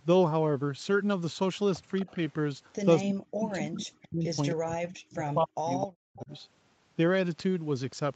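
An echo leak, likely from a loudspeaker at the far end whose echo canceller let its microphone pickup through, returns a faint copy of the speech about 0.26 s late at 1.97 to 2.11 s, roughly 25 dB below the direct sound.

Speech suppressed in double talk appears in two places. From 2.05 to 2.09 s, the canceller likely mistook the talker for echo while both sides spoke and pulled the level down by about 5 dB, a brief dip. From 3.03 to 6.31 s the same confusion drives the speech down by as much as 40 dB, affecting about three seconds of the voice.

Within that stretch, the echo leak returns with the same 0.26 s delay. From 4.02 to 4.55 s it sits about 15 dB under the speech. At 5.81 to 5.86 s it is louder, only about 10 dB down. From 6.2 to 6.4 s it is faint again, near 25 dB below. Throughout the clip, the call path's 8 kHz bandwidth limit dulls the top end.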